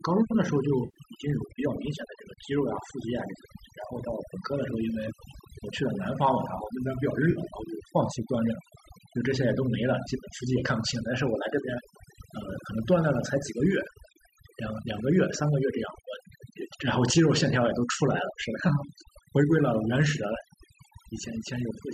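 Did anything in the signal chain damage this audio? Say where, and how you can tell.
Yes. Throughout the clip, the background drops to near silence dotted with twinkling specks. That is overdone noise removal in the call processing: a noise reducer set too hard mutes frequency bands near its noise estimate, taking quiet speech components with them.

Three brief smeared, phasey patches break the speech at 0.85–0.98 s, 7.31–7.40 s and 10.60–10.63 s, lasting 90, 50 and 20 ms. This is AAC frame loss with concealment on the network path, with the decoder rebuilding missing frames from the last good spectrum. The 10 ms frame size behind those gaps points to the low-delay AAC-ELD codec, likely running around 64 kbps.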